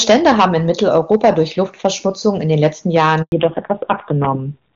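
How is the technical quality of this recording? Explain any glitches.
The recording has three clear faults: constant clipping, a brief dropout, and a loss of bandwidth for its final stretch.

Hard clipping runs through the whole clip. Every loud syllable carries a gritty crackle on its peaks. The speech was driven about 8 dB past what one stage could pass, so the waveform tops were sheared flat. Only a small share of samples, around one or two percent, are affected. Those flattened peaks still spray harmonics high up the spectrum, which the ear hears as that edgy fuzz.

At 3.22 s the speech fades out abruptly and stays silent until 3.32 s. That 100 ms handover gap comes from the call being passed between networks. No speech frames arrived during the switch, so the decoder had nothing to play and let the signal decay to silence until the new link came up. Whatever was said in that tenth of a second is simply gone.

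From 3.32 s to the end, the speech turns muffled, dull and raspy. This is a fallback to narrowband. Before the switch, the HD Voice wideband codec ran at a high rate and kept the speech crisp and full. After it, nothing is left above 4 kHz, and the rough, buzzy texture fits a low-rate narrowband codec around 5.9 kbit/s. Sibilants lose their sparkle, and the speech sounds like an old phone line.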